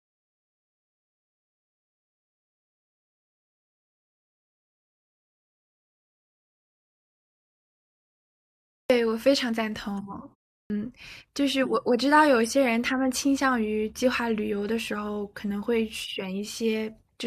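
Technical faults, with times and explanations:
8.77 s and 10.58 s, clipped start after a pause: the output device wakes slowly from silence, swallowing the first 128 ms and 120 ms, so the sound starts abruptly.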